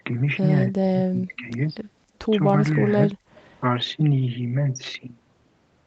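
From 0.72 to 1.53 s and again at 3.07 to 3.19 s, the speech drops sharply, up to about 40 dB, showing as waveform gaps and blank spectrogram columns, likely speech suppressed in double talk.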